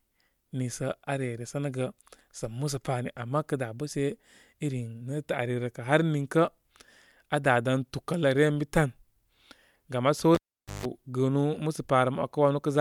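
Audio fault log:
10.35–10.86 s, cable pulled and plugged in: just after "laam aa" a pop cuts the speech to near silence for about 460 ms as the live lead comes out. It is reinserted with roughly 155 ms of 50 Hz mains buzz while only the tip makes contact, then a second pop as the signal returns.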